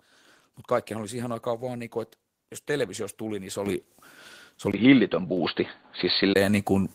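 A speech clip with two kinds of fault. The microphone volume is stepped up three times: at 3.66 s, just after "televisiosta tuli niin se", by about 9 dB, then at 5.37 s by about 4 dB and at 6.87 s by about 3 dB. Voice and background jump together in a single instant, which marks it as an input-gain change rather than a louder talker or a compressor's gradual swell. From 4.72 to 6.36 s the sound turns dull, with a 20 ms silence at the switch, and a faint new noise floor well below the voice, while the overall level barely moves. That points to the input likely having switched to a poorer device. The new tone and noise floor separate it from a plain low-pass filter, and the unchanged level rules out a gain step.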